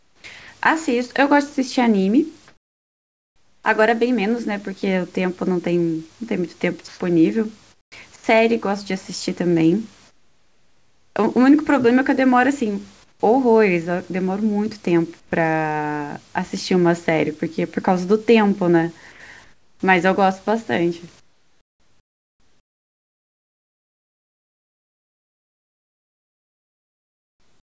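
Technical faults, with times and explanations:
0.0–3.64 s, 6.88–15.32 s and 19.12–27.65 s, comfort noise in place of the background: in the pauses, the room's textured background turns into flat, featureless hiss, about 1.5 s, 1.8 s and 6.9 s of it in turn. This is likely the sender's discontinuous transmission, with the receiver synthesising shaped noise until speech resumes.
0.40 s, 8.16 s and 19.12 s, sound dropped by the voice detector: for 80 ms each time, the speech gives way to steady noise, losing about 50–60 ms of real sound. The detector likely misjudged the sound as background and stopped sending.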